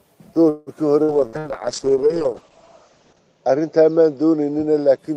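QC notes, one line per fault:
0.49–1.48 s, repeated packet loss (robotic sound): four separate holes in the stream, the longest 173 ms, each patched by stretching the preceding sound. About 36% of this span is concealment, with roughly 180 ms lost outright, giving a choppy texture with pieces missing.
1.08–5.16 s, call bitrate drop: the codec is forced into much coarser coding, which fits a fall from about 32 kbps to 8 kbps, held at its lowest for 2.11 s. The upper band limit drops from 16 kHz to 8 kHz, so the sound turns muffled and rough.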